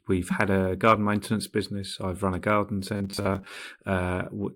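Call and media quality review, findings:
Robotic sound from repeated short buffers, 2.96 to 3.61 s, likely a starved receive or playout buffer. Audio arrives too seldom, so the last 10 ms is looped while about half the real audio is skipped, imposing a rigid 100 Hz metallic buzz over the speech.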